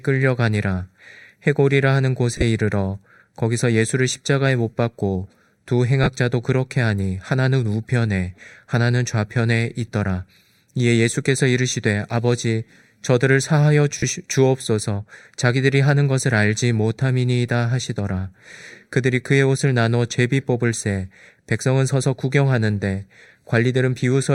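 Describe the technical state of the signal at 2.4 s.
Bluetooth LE Audio frames are being lost between 2.36 and 2.42 s: about 45 ms of audio missing, scattered over 60 ms, with the longest gap roughly 30 ms, which fits six lost 7.5 ms frames. The LC3 decoder fills each gap by repeating the last good spectrum with randomised signs, so the speech there loses its clear harmonic structure and becomes a brief noisy smear, patched over in bursts rather than dropping to silence.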